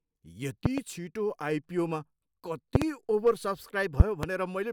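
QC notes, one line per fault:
0.66–0.80 s, 2.75–2.84 s and 4.00–4.26 s: loud pop, each time a pair of sharp pops or thumps standing roughly 20 to 25 dB above the speech, which carries on unbroken underneath. The doubled burst points to a likely electrical step, such as a connector, switch or static discharge, shaped by the following circuitry. Unlike a dropout or digital click, nothing is removed from the signal. The energy is simply added on top.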